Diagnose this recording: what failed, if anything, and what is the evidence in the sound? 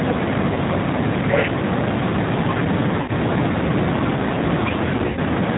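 The whole clip has a dull, boxed-in quality, with nothing above about 4 kHz, and the speech sounds rough and faintly synthetic, as though rebuilt rather than recorded. This is the G.729 codec at the codec stage, running at 8 kbit/s in its G.729A form. It does not send the waveform. Instead it models each short frame as a vocal tract filter, a pitch predictor and a few pulses, and that sparse excitation is what you hear as the grainy, buzzy texture.

Three brief disturbances come from the network stage: VoIP packet loss concealed by the speech codec. At 0.54 to 0.58 s about 20 ms of sound is lost and filled in by the decoder. At 3.02 to 3.11 s, 60 ms is lost and filled in. At 4.97 to 5.20 s, 100 ms is lost in bursts across 200 ms, the longest run 60 ms, which points to one, three and five missing 20 ms packets. In each gap the decoder repeats its last pitch and filter at falling gain, and the sound stays weak for a moment after the packets return.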